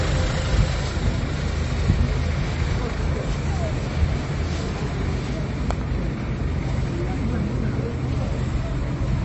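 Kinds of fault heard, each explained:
MP3 compression: throughout, nothing sounds above 7.9 kHz and artefacts are plainly audible, likely from an encoder starved of bits at a rate that fits 32 kbps.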